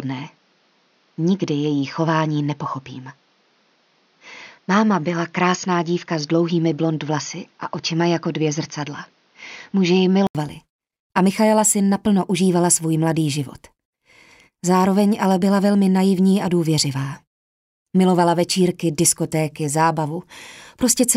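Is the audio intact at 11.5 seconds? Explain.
Yes, at 11.5 seconds the audio is intact, with no dropout, click, distortion or other fault audible at that point.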